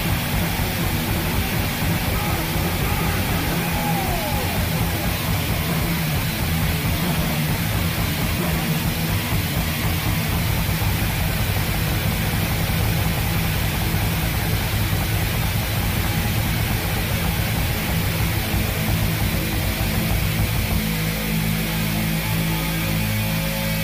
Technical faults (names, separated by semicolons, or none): low bit depth with noise shaping